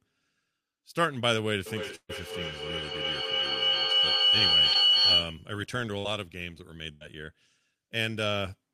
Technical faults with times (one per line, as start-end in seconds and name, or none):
1.66-5.56 feedback howl
1.95-2.11 burst of packet loss
4.73-4.76 short concealed packet loss
5.98-6.06 burst of packet loss
6.92-7.03 burst of packet loss